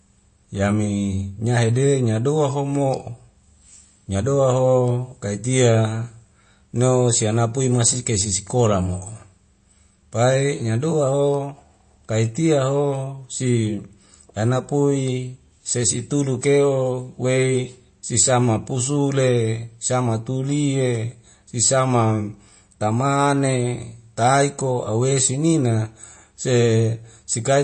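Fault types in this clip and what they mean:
MP3 compression: likely a bit-starved MP3 encode, fitting about 32 kbps, that removes everything above 8.3 kHz and leaves plainly audible watery, swirling artefacts throughout the speech.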